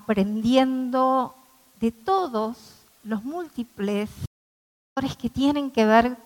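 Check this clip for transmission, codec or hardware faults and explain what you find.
One fault is present: an audio dropout to silence from 4.26 s to 4.97 s. The input feeding the recorder was lost for about 0.7 s, likely through a disconnected device, a failed link or an accidental mute, while the recording carried on writing silence. The sound cuts off abruptly into silence, with no background or room tone underneath, then resumes mid-flow, so whatever occurred during those 705 ms is simply missing.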